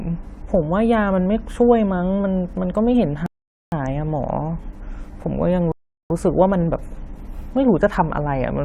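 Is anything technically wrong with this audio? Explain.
Yes. The speech stops twice because of a rebuffering stall. The first runs from 3.26 to 3.72 s, adding about 0.46 s. The second runs from 5.72 to 6.10 s, adding about 0.38 s. Each time, the player used up its downloaded audio and had to wait for more. The sound drops to silence, then picks up exactly where it left off. Nothing is skipped. The gaps only stretch the timing.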